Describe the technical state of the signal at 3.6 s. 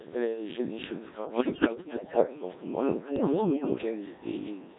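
Bit errors on digital voice radio corrupt the vocoder frames from 3.16 to 3.78 s, around one bit in ten. Pitch, level and timbre lurch frame to frame into bleeps, warbles and robotic gibberish.

The Codec 2 vocoder rebuilds the voice from pitch, voicing and spectral-envelope parameters rather than the waveform, which fits its 1.3 kbit/s mode, so everything sounds buzzy and synthetic.

Echo with no canceller returns the far-end loudspeaker output through the microphone about a third of a second later. It sits about 26 dB down, a thin shadow trailing the sound.

Timecode bleed leaks a 24 frames-per-second linear timecode signal into the path. It sits about 30 dB below the sound as a steady chirping warble flipping between pitches near 1 and 2 kHz.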